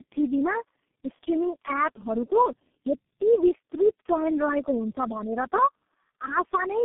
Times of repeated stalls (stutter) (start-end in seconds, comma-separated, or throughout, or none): none